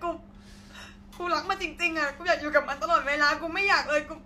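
Speech, with no technical fault to be heard anywhere in the recording. Nothing stands out at any moment that would call for a time or a cause.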